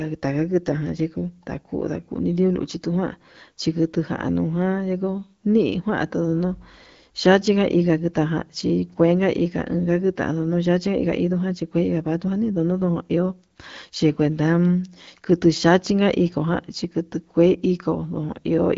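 The speech comes through an AMR wideband (HD Voice) codec path at 12.65 kbit/s, with content stopping at about 7.6 kHz, and no technical faults can be heard.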